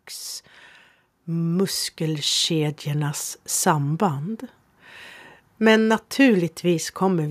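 From 1.25 to 3.27 s the automatic gain rises by about 6 dB, as the AGC judges the input too quiet and slowly lifts it. Speech and background noise swell together; the waveform envelope widens steadily and the spectrogram brightens across all frequencies, noise floor included.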